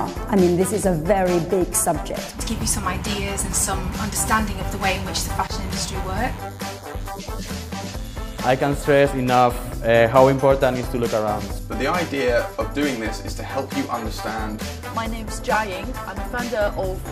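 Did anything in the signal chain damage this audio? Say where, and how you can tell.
Yes. From 4.67 s to 9.11 s a thin, steady buzz sits under the audio, well below the main signal (roughly 25 dB down), with a 100 Hz fundamental and a dense stack of harmonics. That is DECT cordless phone buzz, entering at the analogue stage: a nearby handset or base station transmits a radio burst every 10 ms, and the analogue circuitry rectifies each burst into an audible click train.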